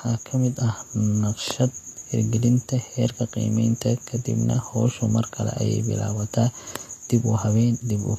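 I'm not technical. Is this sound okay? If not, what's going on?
No. Vorbis compression, throughout: the speech sounds hissy and grainy with nothing above 14.2 kHz, likely from squeezing the file small enough to roughen detail into noise.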